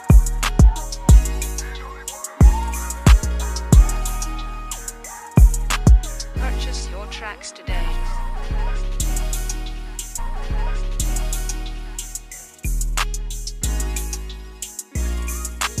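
The player queued the same stream segment twice, so a stream segment repeated: at 10.17 s the audio jumps back with a small blip, and about two seconds of programme play again through 12.17 s, adding 2.0 s of duplicated sound to the clip.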